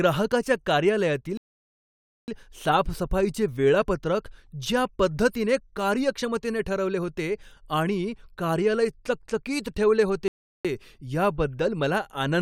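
At 1.37 s the speech cuts to silence until 2.28 s, a rebuffering stall adding about 0.91 s. A second stall runs from 10.28 to 10.65 s, adding 0.37 s. The player ran dry of downloaded audio each time. Speech resumes exactly where it stopped.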